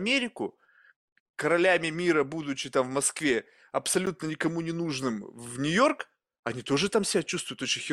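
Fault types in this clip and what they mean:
Block of digital silence: at 4.06 s, just before "никому не нужным", the speech drops abruptly to silence for about 12 ms and returns with no fade, so the whole event is heard as a brief tick. A gap of this length, with hard cuts at both ends, is consistent with an output buffer not being filled in time. Its duration fits a 512-sample buffer.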